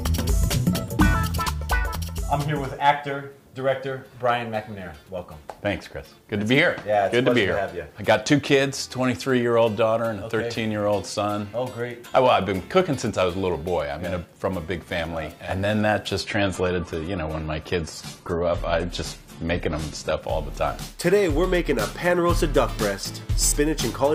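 From 16.20 to 20.20 s, an adaptive stream drops to a lower bitrate: treble vanishes above 14.1 kHz and artefacts thicken, yet no gap occurs, unlike a dropout.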